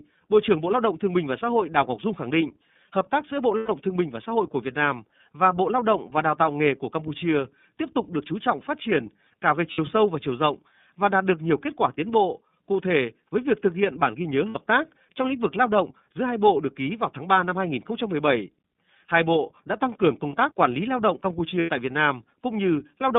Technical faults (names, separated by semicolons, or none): iLBC codec; lost iLBC frames